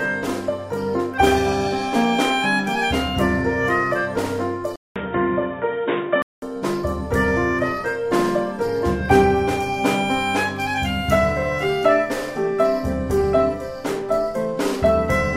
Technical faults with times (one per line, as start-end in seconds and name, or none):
4.76-6.42 input switched to a poorer device